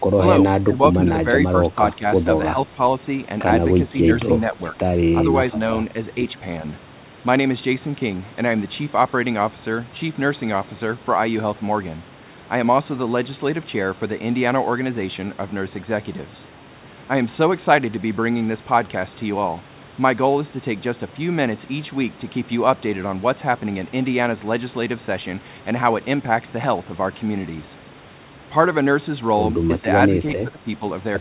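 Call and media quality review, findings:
Speech suppressed in double talk: brief level dips at 0.66, 0.93, 1.98, 2.75, 4.5, 4.72 and 30.43 s (longest, about 0.3 s, about 15 dB down). Likely echo canceller over-suppression. Partial attenuation, not packet-loss silence gaps.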